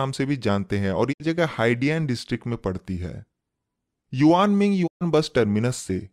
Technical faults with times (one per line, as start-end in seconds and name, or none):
1.11-1.22 digital broadcast dropout
4.86-5.03 digital broadcast dropout